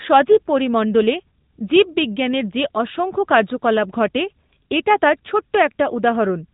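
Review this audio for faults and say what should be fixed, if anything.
Throughout, the speech has plainly audible AMR narrowband mobile codec damage: nothing gets through above 3.8 kHz, and there's a buzzy, synthetic edge from a vocal-tract model rebuilding each 5 ms from a few pulses, which fits a higher-rate mode around 10 kbps. To prevent it, capture the speech over a wideband path rather than a narrowband mobile link.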